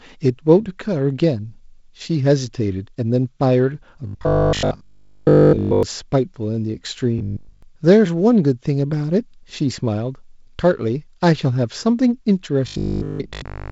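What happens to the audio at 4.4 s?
From 4.07 to 5.83 s the speech turns into robotic sound from repeated short buffers. The likely cause is new audio arriving too seldom, so playback fills the gaps by looping the most recent short block while the real signal is skipped. Across that span essentially all of the output is repetition, and the loop rate imposes a rigid 50 Hz buzz, which fits a 20 ms block. The speech takes on a metallic, droning quality that only loosely tracks the words.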